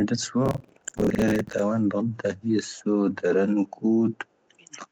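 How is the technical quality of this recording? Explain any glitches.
The recording has two glitches. It has passed through a call, so nothing above 8 kHz is present.

From 0.46 to 1.59 s there is processor overload crackle. The processor kept missing its deadlines on short buffers, around 10 ms each. Dozens were missed. Each gap was filled by repeating old audio, leaving hard edges. The result is a gritty, tearing crackle over the speech.

From 2.76 to 2.84 s a very faint echo leak appears. A copy of the speech returns 261 ms late, far below the main level. The likely cause is a loudspeaker on the far end whose echo canceller let some residue back into the call.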